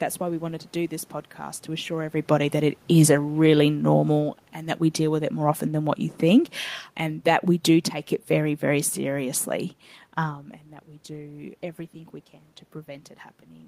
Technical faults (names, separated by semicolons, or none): automatic gain falling